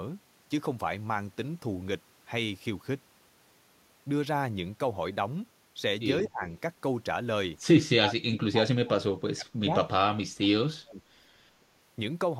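Speech suppressed in double talk occurs three times: from 6.22 to 6.43 s, from 7.94 to 9.73 s, and from 10.0 to 11.02 s. The talker's level sinks, by around 25 dB in the short first dip, about 30 dB in the second, and as much as 35 dB in the third. This is likely an echo canceller that could not separate the talker from the overlapping loudspeaker echo and pulled down both.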